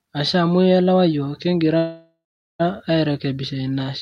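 From 1.77 to 2.61 s the speech stops and the last sound buzzes, fades, then goes silent. It resumes where it left off, with nothing lost. This is a call audio freeze, likely from delayed packets emptying the jitter buffer.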